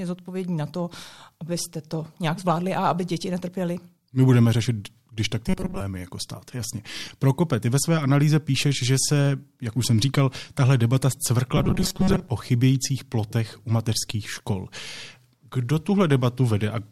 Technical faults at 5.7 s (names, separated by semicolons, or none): robotic sound from repeated short buffers